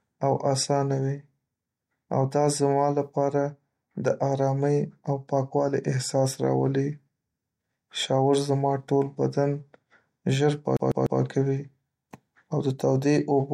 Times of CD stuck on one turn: 10.77-11.21

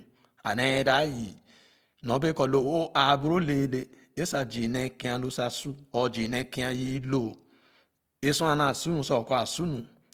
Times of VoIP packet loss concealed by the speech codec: none

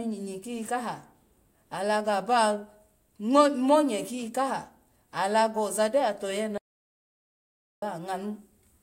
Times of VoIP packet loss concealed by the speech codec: none

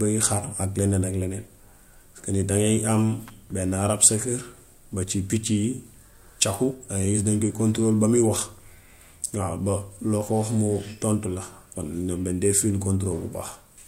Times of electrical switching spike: 3.28-3.30

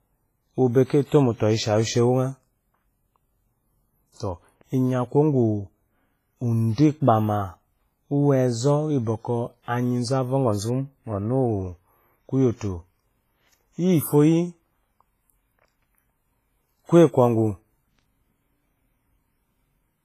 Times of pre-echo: 0.84-0.90, 4.12-4.16, 6.73-6.78

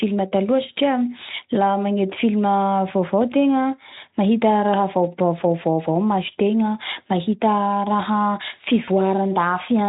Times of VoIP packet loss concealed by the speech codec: 8.85-8.89

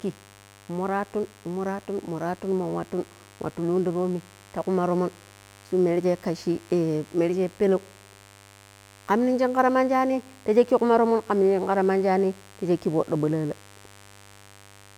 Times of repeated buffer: none

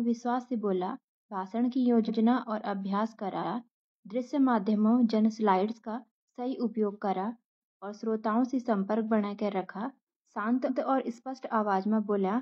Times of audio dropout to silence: none

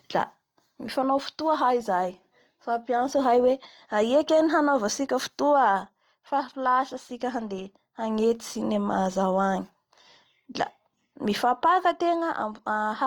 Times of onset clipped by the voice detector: none

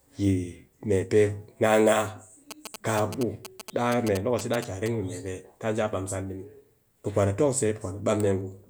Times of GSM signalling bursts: 2.51-4.88

